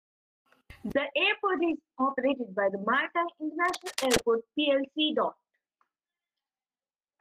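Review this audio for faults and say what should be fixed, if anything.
Seven brief rough patches in the speech come from lost packets rebuilt from error correction, at 1.33, 1.57, 1.69, 1.99, 2.09, 2.13 and 2.23 s, each 20 ms long. The following packet carried a low-bitrate copy of each lost one, so the decoder played that copy and no gap is heard. Each rebuilt frame sounds coarser and noisier. Unlike packet loss concealment, nothing is smeared or repeated from earlier audio. To prevent it, reduce network loss with better routing, prioritisation or a wired link.

From 3.65 to 4.23 s, dense, uneven bursts of scratching and rustling ride over the speech at a level only a few decibels below it. This is cable scratch noise, likely from a worn cable, connector or control being moved so its contact resistance flickers rapidly. Unlike steady hiss or hum, it is irregular and confined to that half-second. 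Unlike digital clicks, it has a gritty, continuous texture rather than isolated sharp ticks. To prevent it, replace or reseat the suspect cable and connectors and secure them so they cannot move during recording.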